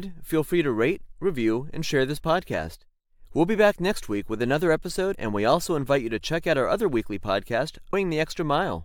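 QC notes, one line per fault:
7.92 s, damaged data in a compressed stream: a brief glitch of under 20 ms cuts into the speech near the end of the clip. A stretch of the compressed stream arrived corrupted, so the decoder could not read those frames properly, briefly turned garbage into sound, lost sync, then skipped forward until it found the next valid frame header. That produces the brief glitch.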